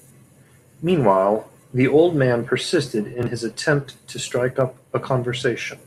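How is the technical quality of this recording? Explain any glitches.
The speech carries four isolated clicks, at 1.44, 2.67, 3.65 and 4.61 s. Each sounds like a single sharp tick, most likely dropped samples: a handful of samples missing, so the waveform jumps abruptly. Unlike a dropout, no audible sound disappears, since the loss lasts a fraction of a millisecond.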